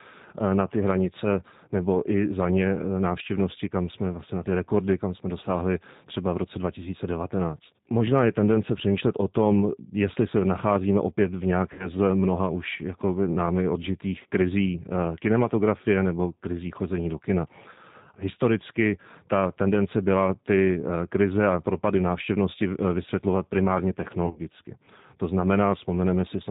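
The G.729 codec runs throughout. It rebuilds speech from a filter, a pitch predictor and a few pulses per frame, at 8 kbit/s. Nothing above 4 kHz survives. The damage is plainly audible: the speech sounds narrow, rough and slightly synthetic.

VoIP packet loss concealed by the speech codec follows at 11.73 s, after "se nacházíme opět v" and before "z mnoha už jakoby". About 60 ms is gone. The decoder stretches its last pitch and filter into a sound that fades until 11.89 s. At 24.26 s, after "návštěvnosti eh vysvětlovat primárně", 80 ms is lost in short gaps over 100 ms. The longest gap is 30 ms. The sound turns weak or distorted until 24.40 s.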